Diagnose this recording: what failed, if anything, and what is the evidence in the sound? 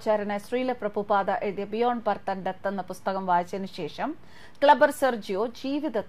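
Nothing failed here: listening closely, I can't hear any dropout, distortion, glitch or other sign that any stage of the chain misbehaved, so there's nothing to diagnose.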